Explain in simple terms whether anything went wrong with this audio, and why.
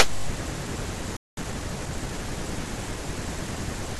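At 1.17 s the speech cuts to silence for about 0.2 s, until 1.37 s. That is a playback stall: the player most likely ran short of incoming data or was briefly held up, so nothing reached the output until it recovered.

From 1.37 s to 2.19 s the speech runs about 1.25 times faster than normal but keeps its usual pitch. This is time-compressed catch-up: the player trims tiny slices and blends the joins to recover the time lost in the gap.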